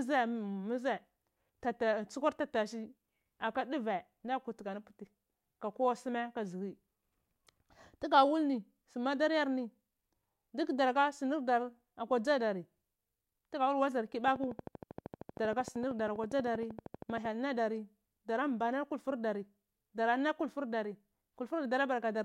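A train of clicks runs from 14.28 s to 17.26 s. Pulses arrive at a steady 12.8 per second, about forty in all, each with much the same shape and peaking a few decibels above the speech. The even spacing suggests a repeating electrical disturbance, likely interference from nearby equipment or a faulty connection or power supply. It is heard as rapid, mechanical ticking laid over the speech and carrying on through its pauses.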